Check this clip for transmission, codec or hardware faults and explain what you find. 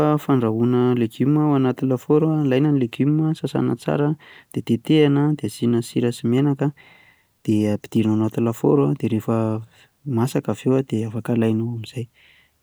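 Nothing here points to a transmission, codec or hardware problem; the speech comes across steady and whole, so there's nothing to report.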